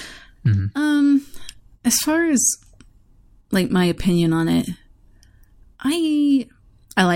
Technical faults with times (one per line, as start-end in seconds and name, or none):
none